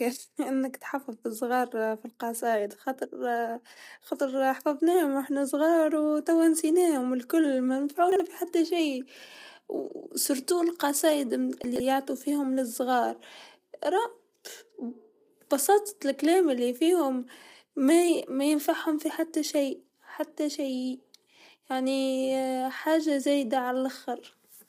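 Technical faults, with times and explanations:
Throughout: low-delay AAC compression. The speech sounds rough and grainy, with noise filling the gaps between harmonics and a thin, synthetic top band. This likely comes from AAC-ELD at around 32 kbps, whose low bitrate leaves too few bits to code the spectrum cleanly. A spectrogram shows smeared harmonic lines and a patchy upper band.
8.12 to 8.20 s: chunks out of order. Just after "الكل و" and before "في حتى شيء", a 40 ms chunk plays one chunk late, so the audio jumps briefly out of sequence. The waveform shows three abrupt discontinuities.
11.64 to 11.80 s: chunks out of order. Just before "فيهم للصغار", a 40 ms chunk plays three chunks late, so a longer jumbled moment is heard. Hard joins appear as waveform steps.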